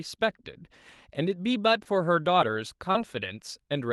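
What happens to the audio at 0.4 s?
Nothing goes wrong at 0.4 s: the speech passes through intact, with only the steady band-limited character of the Opus call path.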